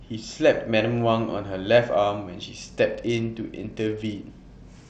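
At 2.55 s the sending device cut its SBC encoding budget sharply, a Bluetooth SBC bit pool drop consistent with a fall from bit pool 31 to 11, near 83 kbps. Until the end the starved upper sub-bands dull the speech's treble, and gritty quantisation noise rises.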